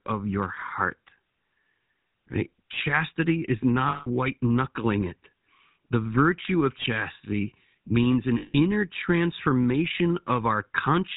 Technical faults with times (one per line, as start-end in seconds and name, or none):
0.00-11.17 GSM full-rate codec
3.88-4.09 lost GSM frames
6.82-6.85 lost GSM frames
8.38-8.55 lost GSM frames